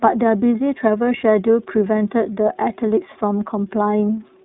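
iLBC codec coding runs through the whole speech clip, from the first moment to the last. The codec codes each frame's excitation on its own, with no help from the previous frame, and the plainly audible roughness and slightly synthetic texture fit 30 ms frames at the 13.33 kbps mode. The line band sits at about 150 Hz to 3.7 kHz, with nothing above 3.8 kHz, so the sound is thin and muffled and lacks crisp sibilance.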